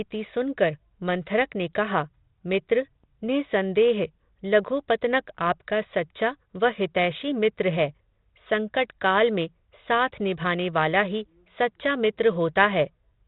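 No technical faults are audible.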